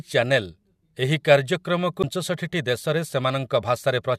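At 2.03 s a brief glitch cuts through the speech, caused by damaged data in a compressed stream: corrupted bytes made the decoder misread a frame and resynchronise at the next header.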